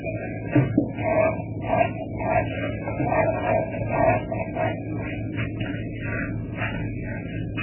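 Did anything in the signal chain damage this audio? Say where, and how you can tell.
Yes, throughout the clip the sound is watery and swirly, with smeared attacks and nothing above 3 kHz. That points to the codec stage, likely MP3 compression at a very low bitrate, around 8 kbps. Starved of bits, the encoder cuts the treble and drops quieter spectral detail.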